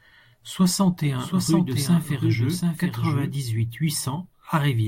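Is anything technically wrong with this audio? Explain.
Yes. From 1.19 to 3.35 s there's a doubled audio track. A dry copy trails about 0.7 s behind, a few dB quieter, likely from a second, slower capture path.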